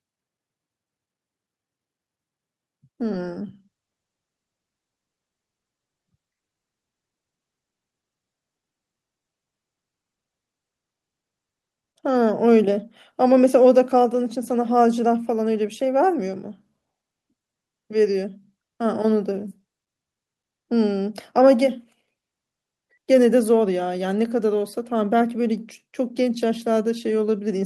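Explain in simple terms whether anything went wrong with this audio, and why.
Nothing went wrong with this speech recording. It came through a normal internet call connection, so the very highest sounds above about 12 kHz are trimmed off, as such calls usually do.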